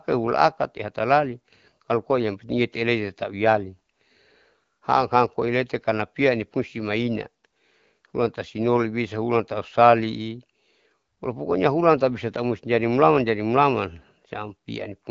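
Nothing stood out on listening to this speech, which comes through the AMR wideband (HD Voice) codec at 12.65 kbit/s with its band topping out a little above 7 kHz.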